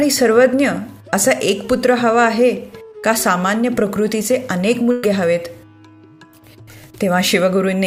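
At about 4.91 s there's a burst of packet loss running to 5.04 s. Roughly 120 ms never arrived, so the receiver stretched the last bit of sound across about 116 ms, fading it out, before jumping ahead with that stretch simply gone.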